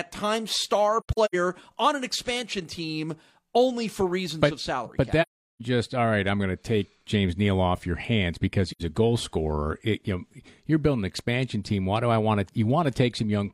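A speech clip with AAC frame loss with muting: compressed frames went missing and the decoder filled them with silence, so the overlapping windows fade the sound to soft-edged gaps. The first, from 1.00 to 1.35 s after "times star" and before "on an expansion team", is broken up, with about 213 ms lost in patches across 341 ms, the longest around a tenth of a second. The second runs 5.21 to 5.61 s, about 384 ms of silence before "just all right I'm". The third, 8.71 to 8.82 s between "off your hands because" and "a goal scorer", is about 85 ms long, which fits two frames.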